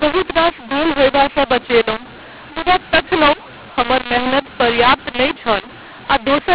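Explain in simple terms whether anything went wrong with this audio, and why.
Something did go wrong: a mu-law and A-law mix-up runs through the whole clip. The speech was stored in the A-law form of telephone coding but played back as if it were mu-law, so loudness levels get scrambled. Speech sounds harsh and gritty, and the pauses fill with hiss instead of silence. Ordinary overload distortion only roughens the loudest moments. Here even the quietest stretches turn noisy, which points to the wrong decoding law.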